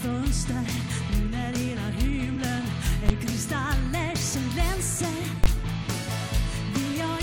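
Compressed frames skipped at 2.81 s: about one whole frame of the encoded audio never reaches the output, either missing from the file or rejected by the decoder as damaged. The frame length of 23.2 ms fits this, and roughly 20 ms of the sound is lost, so the audio jumps slightly ahead.

Invalid numbers at full scale at 3.09 s and from 5.44 to 5.46 s: a calculation produced infinite or undefined values, which the output clamped to the largest possible sample value. Each block holds flat at one extreme value, far beyond the audio's peaks, for 10 ms at 3.09 s and 20 ms at 5.44 s. Both blocks are so brief that each lands as a single very loud bang that replaces the audio for that moment.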